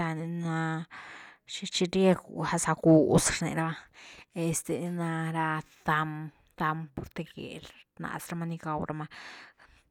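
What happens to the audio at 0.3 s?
Nothing goes wrong at 0.3 s; the speech plays through that moment intact.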